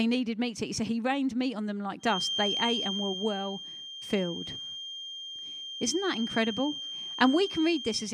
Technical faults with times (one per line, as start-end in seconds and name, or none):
1.98-8.14 feedback whistle